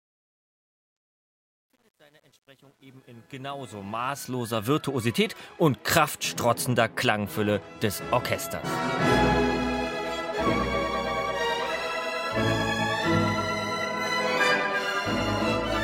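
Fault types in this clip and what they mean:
Truncation distortion on a fade: the fade-in from the start to about 4.74 s is built from too few level steps with no dither, so the quietest part, from 0 to about 3.76 s, comes out gritty. The coarseness fits roughly 10-bit resolution. Unlike a noise gate chattering, the grit tracks the rising level and smooths out as the fade reaches full volume.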